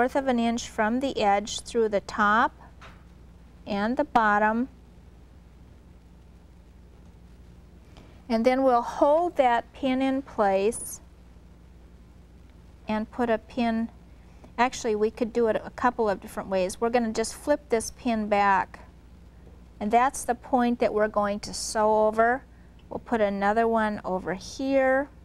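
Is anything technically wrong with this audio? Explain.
No, nothing technically wrong can be heard in this audio. There are no faults to point to anywhere in it.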